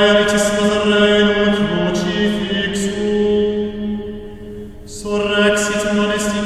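At 4.62 s the music carries a single sharp click, the sound of dropped samples: a few samples, around a tenth of a millisecond's worth, are likely missing from the stream, so the waveform steps abruptly from one value to a later one instead of continuing smoothly. Nothing audible is removed by so brief a gap. On a spectrogram it shows as one thin vertical line spanning the spectrum; on the waveform, a small discontinuity.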